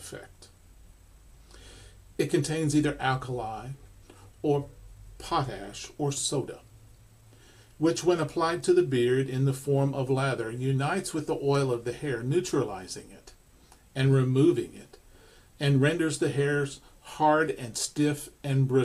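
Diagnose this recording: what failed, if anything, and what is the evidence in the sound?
Nothing here failed, as far as I can hear: no stage in the chain leaves a mark on the sound, so there's nothing to diagnose.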